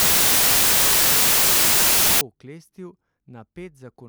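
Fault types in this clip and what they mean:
Samples built from the wrong bytes: from the start of the speech to 2.21 s the audio is replaced by loud, harsh broadband noise. The reader is assembling each sample from the wrong bytes, either off by one byte, in swapped order, or with the wrong alignment. As a result the rapidly changing low-order bits end up as the large part of every value, and that turns the signal into broadband noise.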